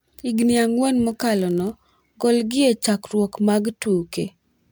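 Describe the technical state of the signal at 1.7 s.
A block size mismatch (padded) runs from 1.07 to 1.89 s: one stage delivers shorter blocks than the next stage reads, and each read is topped up with zeros, which fits a 1024-sample read block. The repeated silent gaps produce a 43.1 Hz buzz across the speech, ending just before "golgi e chakruok mag". The slowdown is negligible (0.999×), so pitch stays essentially normal.

Generation loss is also present, as throughout the clip. The audio was likely passed through MP3 at 128 kbit/s around five times, each pass requantising on a shifted frame grid. The speech sounds swirly, smeared and hollow, with blurred attacks, and there is nothing above 20.1 kHz.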